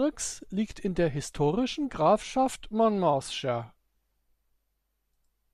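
Nothing goes wrong anywhere along the way here, so there are no technical faults to point to in this stretch of speech.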